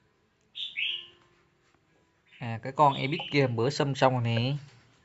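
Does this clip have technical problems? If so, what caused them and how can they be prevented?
No, there are no technical problems in this clip.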